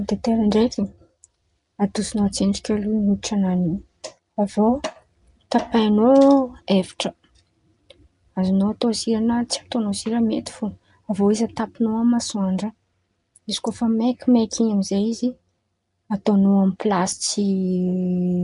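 Nellymoser compression runs throughout the speech, giving a plainly audible rough, hissy halo, a smeared, underwater quality and nothing above 10.6 kHz. The likely cause is the Nellymoser Asao codec at a rate fitting 44 kbps, whose fixed two bits per sample leave weak bands to be filled with noise.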